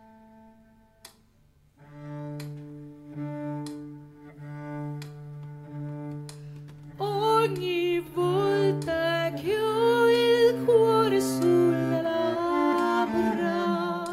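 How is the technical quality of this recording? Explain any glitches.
No glitches turn up anywhere here; nothing catches the ear as a fault, so there's really nothing to explain.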